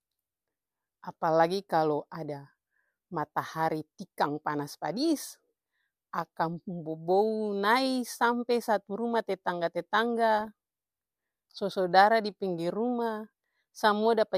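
From 10.38 to 10.47 s the speech turns to DAB burbling. Bit errors near 0.4 percent slipped past error correction, corrupting MP2 audio data so single sub-bands blip or leap in level for up to a frame. Unlike a dropout's silence, it burbles.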